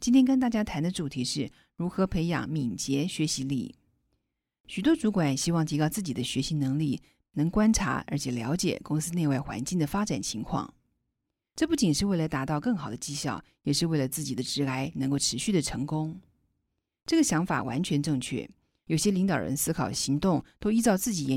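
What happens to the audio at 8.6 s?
Nothing goes wrong at 8.6 s; the speech runs on intact through that moment with no dropout, click or distortion.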